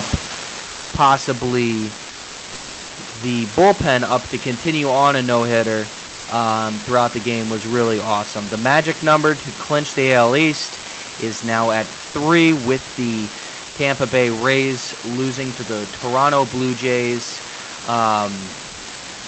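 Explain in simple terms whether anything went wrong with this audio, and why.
Several things went wrong in this speech recording, and they are easy to tell apart by when they happen.

The first is an unreliable data bit. A steady crackle or fizz runs through the whole clip, even in the gaps between words. One digital line carrying the sound is flaky, so some samples come out wrong and each mistake clicks at the same size. Background hiss from a microphone would be smooth, not crackly. Clicks from a bad cable would come in bursts rather than running evenly throughout.

The second is automatic gain falling. The speech starts loud, then sinks over its first second, from about 0.05 to 1.05 s. The automatic level control decided the input was too loud or too noisy and turned itself down gradually. The background sinks with the speech, which shows the whole signal was turned down. A speaker drifting away from the microphone would change the tone, not just the loudness.

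The third is sound dropped by the voice detector. At 0.67 to 0.91 s, about a quarter of a second, the speech gives way to plain, even noise or near silence before returning. It happens again, more briefly, at 12.07 to 12.13 s. This is likely the call's silence detector mistaking part of the speech for background and stopping sending, with the receiver filling in comfort noise. A network dropout would sound like a glitch or a stutter instead of a smooth patch of steady noise.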